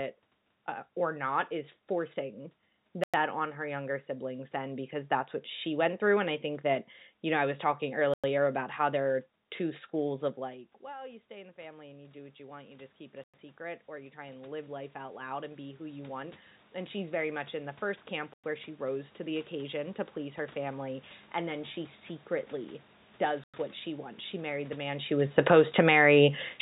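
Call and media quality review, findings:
Gap between chunks at 3.04–3.14, 8.14–8.24, 13.24–13.34, 18.34–18.44 and 23.44–23.54 s. 100 ms holes every 5.0 s: the stream is delivered in 5 s chunks, with silence inserted at each join, likely by padding or late chunk start.

Automatic gain rising, 10.36–21.06 s. The input drops about 20 dB as the talker moves away around 10.5 s. The AGC then ramps gain up about 18 dB, so voice and room noise swell together.

Automatic gain falling, 25.27 s to the end. After the talker moves near 25 s, the AGC pulls gain down, and level and background sink together. Everything passes through a narrowband call path with nothing above 4 kHz, which fits G.711 mu-law at 64 kbps.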